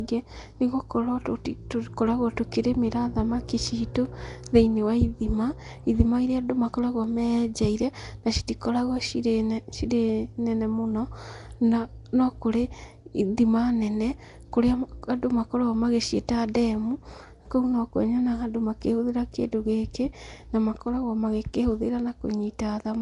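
From start to finish the speech carries a rough, hissy halo and a smeared, underwater quality, plainly audible throughout, which points to Nellymoser compression as the likely cause, at a rate that fits roughly 44 kbps. That codec spends a fixed two bits per sample on each 256-sample block, so bands too weak to earn bits are replaced with noise. On a spectrogram, nothing appears above 10.6 kHz, and the quieter bands show grainy, noise-filled texture instead of clean harmonic detail.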